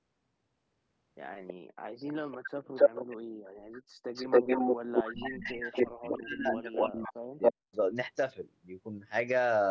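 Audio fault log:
1.47–1.54, 2.07–3.17, 3.72–3.81, 4.13–6.85, 7.41–7.51 s, echo leak: a delayed copy of the speech returns, likely from an echo canceller letting loudspeaker pickup through. The delay is 324 ms at first, then 278 ms. Its level ranges from barely audible to as loud as the speech or louder. On a spectrogram, the harmonic patterns repeat, shifted right by that delay.
5.11–7.77 s, speech suppressed in double talk: while the far side plays on the loudspeaker, the speech dips in chunks, about 2 s in total, and falls by up to about 40 dB. This is likely the canceller muting both signals. The waveform shows sudden gaps in the envelope.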